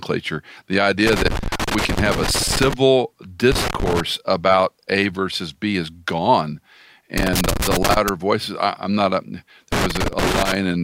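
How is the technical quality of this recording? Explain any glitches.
The speech is marred by loose connector crackle in four bursts: 1.07 to 2.74 s, 3.52 to 4.00 s, 7.18 to 8.09 s, and 9.72 to 10.55 s. A worn or dirty contact somewhere in the cable path keeps making and breaking, chopping the signal into ragged fragments. Unlike evenly spaced digital clicks or the low thumps of handling noise, this crackle is scratchy and irregular, clustering in uneven bursts.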